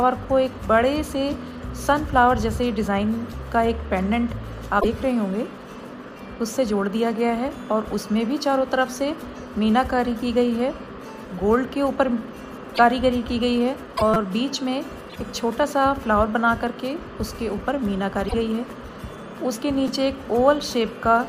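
At 4.80 to 4.85 s there's a short glitch where the sound also skips ahead. The same thing returns at 12.74 to 12.79, 13.96 to 14.02, 15.09 to 15.16 and 18.27 to 18.34 s. With 26.1 ms frames, the likely cause is a broken MP3 bit reservoir: after a cut, a frame reads its borrowed bits from the wrong frame.

From 14.14 to 14.16 s, right after one of those glitches, a tiny slice plays four extra times with hard joins, giving a fast buzzy stutter. That's a repeated buffer, with 5.8 ms pieces, which fits a 256-sample buffer. A shorter one at 19.88 s repeats twice more and comes across as a small click-buzz.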